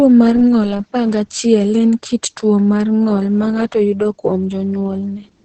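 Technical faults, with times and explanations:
Throughout, Opus voice compression: nothing survives above 8.7 kHz, and the speech sounds muffled, hoarse and faintly robotic because SILK linear prediction codes the excitation coarsely, which fits roughly 10 kbps. A plain low-pass filter would dull the voice without roughening it like this.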